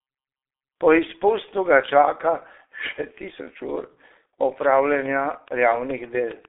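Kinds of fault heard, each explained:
G.723.1 codec, throughout: the speech is squeezed through an early internet-telephony coder that models the voice in coarse 30 ms frames, and the heavy damage fits a bitrate of roughly 6 kbit/s. The band runs from about 300 Hz to 3.6 kHz, and nothing above 3.7 kHz survives. The voice therefore sounds muffled and hoarse, and consonants smear because the voice model adapts too slowly to track quick changes.
Train of clicks, 4.64 to 6.46 s: a run of around fifteen near-identical pulses ticks over the speech at a steady 7.18 per second, evenly spaced, with peaks well above the speech level, roughly 10 dB louder. Because the pulses repeat with the same shape and timing regardless of what is being said, they come from outside the audio itself, likely interference picked up from nearby equipment or a failing interface.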